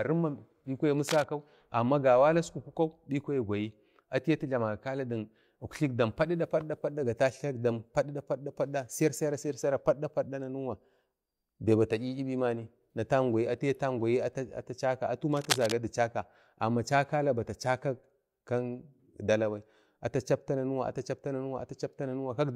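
At 1.08 s, just after "bi kwa", a burst of cable scratch noise rustles over the speech until 1.24 s, about 10 dB below it. A louder burst follows from 15.32 to 15.73 s. A worn cable or connector being moved is the likely cause.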